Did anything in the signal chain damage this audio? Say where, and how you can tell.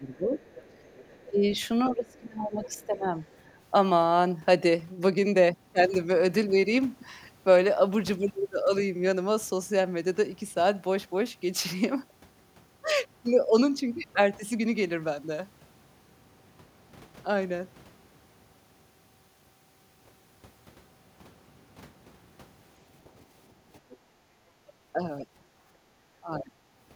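Yes. The damage is in call processing, in the echo canceller.

Speech suppressed in double talk shows up at 0.00 to 0.43 s, 1.30 to 3.09 s, 24.93 to 25.27 s and 26.20 to 26.64 s. The speech sinks by about 15, 20, 10 and 25 dB. The level falls while the talker keeps going. That points to the canceller treating the talker as echo. It likely failed to separate the two sides and pulled both down.

The other side's voice leaking through is audible from 0.14 to 3.50 s. It sits about 25 dB below the speech. A brief scrap returns at 23.91 to 23.95 s, about 30 dB down. A second, quieter voice under the talker gives it away. The likely cause is loudspeaker sound reaching the microphone that the canceller did not fully remove.

Background gated by the echo canceller occurs at 23.85 to 24.44 s, a drop of about 12 dB. It happens again at 25.55 to 25.92 s, about 8 dB down. Each dip lasts around half a second or less. 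The room sound falls away abruptly, then returns. The canceller clamped the microphone while the loudspeaker played, then released it.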